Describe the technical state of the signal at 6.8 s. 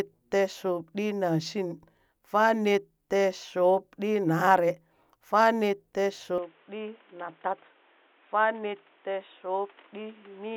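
At 6.8 s the speech is already past a sudden change at 6.38 s, most likely an input switched to a poorer device, lasting to the end. The band stops near 3.8 kHz, level drops about 5 dB, a new noise floor sits around 30 dB down, and there's no gap at the switch.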